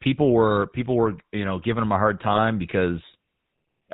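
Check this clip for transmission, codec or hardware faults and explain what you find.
Two faults are present: the GSM full-rate codec throughout, and a burst of GSM bit errors partway through.

Throughout the speech, the GSM full-rate codec rebuilds the voice from a vocal-tract model and sparse pulses, cutting everything above 4 kHz. This gives a plainly audible buzzy, gravelly roughness, consistent with a 13 kbps stream.

From 2.27 to 2.39 s, GSM bit errors corrupt the filter, pitch or gain values reaching the decoder. For that span, the voice breaks up as the spectrum bends or the level jumps.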